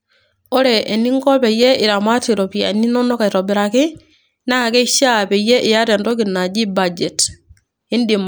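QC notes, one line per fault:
0.13–7.60 s clock drift buffer slips: clicks every 1.49 s, likely clocks about 100 ppm apart dropping or repeating a few samples; strict regularity distinguishes them from random crackle.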